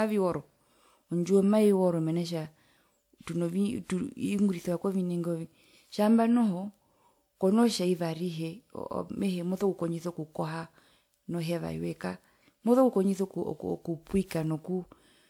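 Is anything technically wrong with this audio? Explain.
Yes, there's a problem running through the whole speech clip, and it sounds like generation loss. The swirly, hollow, smeared character is far worse than a single encode at a decent rate would give, which is likely from being decoded and re-encoded around half a dozen times or more, with a WMA-style codec at roughly 128 kbit/s fitting the texture. Each pass requantises on a shifted frame grid, so noise and spectral gaps pile up and consonant attacks go soft. The top end still reaches about 20.1 kHz, so it's the texture that's damaged, not the bandwidth.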